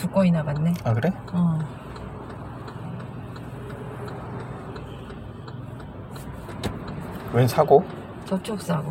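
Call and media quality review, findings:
No audible faults found in the sound recording; nothing to escalate.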